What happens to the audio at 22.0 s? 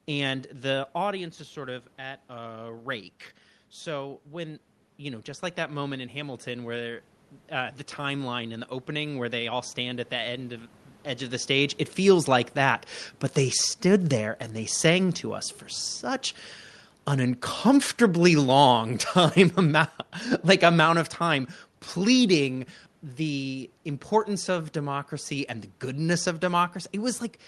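At 22.0 s the level is near the end of a stretch of automatic gain falling that runs from 17.15 to 22.57 s. The gain control judged the input too loud, or its background noise too strong, and turned it down gradually, by about 6 dB in total, so the speech and the room noise behind it sink together. On a waveform the envelope tapers smoothly downward over those five seconds. On a spectrogram every band, including the background floor, fades evenly.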